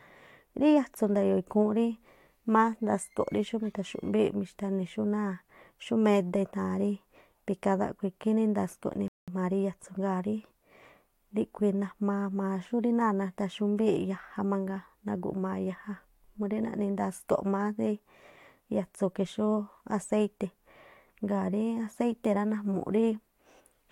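A speech recording with a rebuffering stall from 9.08 to 9.28 s: playback ran dry and paused, adding 196 ms of silence before resuming exactly where it stopped, with nothing missing. The waveform shows a flat gap and the spectrogram a blank vertical band.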